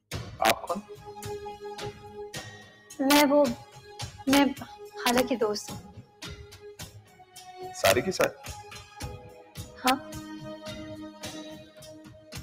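A speech-tuned noise suppressor applied to music or sounds runs through the whole clip. It treats sustained material and decays as noise, so the level swings by around 10 dB as attacks pass and held sound sinks, giving a pumping, thinning character. Integer overflow produces harsh cracks at 0.45–0.51 s, 3.11–3.21 s, 4.33–4.38 s, 5.07–5.20 s, 7.85–8.24 s and 9.88–9.90 s. On each of these peaks the signal exceeds full scale by about 1 to 3 dB, and instead of clipping the sample values wrap to the opposite sign, which is far sharper than ordinary distortion. Sound cut by the noise suppressor is heard at 2.61–2.94 s, 3.64–3.90 s, 5.81–6.22 s, 6.45–7.36 s, 9.25–9.57 s, 11.64–11.82 s and 12.07–12.33 s. In these stretches the suppressor clamps harder on sustained content, dropping it by about 7 to 12 dB and cutting tails short, with the deepest losses at 5.81 s and 6.45 s.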